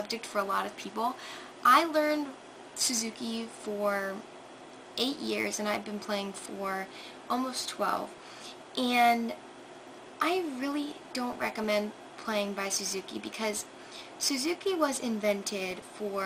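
Throughout, the sound is dull and granular, with upper bands flickering out: MP2 compression, likely at a rate around 80 kbps; the spectrogram shows a ragged, patchy top end. From 0.65 to 4.23 s, timecode bleed adds a chirping warble about 30 dB down, alternating near 1 and 2 kHz at 24 frames per second. It shows as two faint stacked lines. DAB burbling, where reception bit errors corrupt sub-band data, brings blips of noise at 2.11–2.17, 8.07–8.18, 11.32–11.71 and 15.71–15.89 s, seen as blotchy, flickering band bursts.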